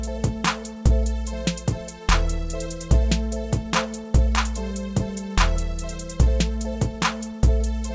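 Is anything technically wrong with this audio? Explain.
No, nothing's wrong here; it's simply come through a normal call path, and the way the top end stops at about 8 kHz fits a wideband call codec such as G.722 running around 64 kbps.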